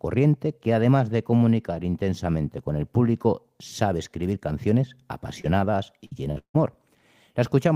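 Just after "sabe escribir canciones", at 5.41 to 5.46 s, there's a short concealed packet loss. About 20 ms of the speech never made it to the decoder in time, so the receiver patched the hole by carrying the last sound forward for roughly 23 ms and then blending back into the real audio. You hear it as a quick smear or wobble in the flow, and anything very brief inside that slice just isn't there.

Then come two bursts of packet loss close together, at 6.06 to 6.13 s and 6.31 to 6.38 s. Each time about 60 ms of audio went missing in a run, and the receiver stretched the last sound over it for around 50 to 55 ms while turning it down. So a voiced bit turns into a short held buzz, or otherwise a fading hiss, and the speech picks up again a little further on with that chunk gone.

Right on the heels of the second burst, from 6.38 to 6.56 s, there's what's most likely a long network dropout. 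About 160 ms of speech is gone. The receiver keeps the last sound going as a fading buzz or hiss, which then gives way to around 90 ms of silence before the audio comes back further along, with the lost stretch simply skipped.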